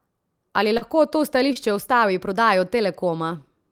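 A short speech recording with two instances of short concealed packet loss, at 0.77–0.83 s and 1.53–1.57 s. About 40 ms of audio failed to reach the decoder in time at the first point, and about 20 ms at the second. In each gap the receiver synthesised a continuation of the preceding sound and then crossfaded back into the real signal. Each patch is audible as a brief smeared or wobbling moment in the speech.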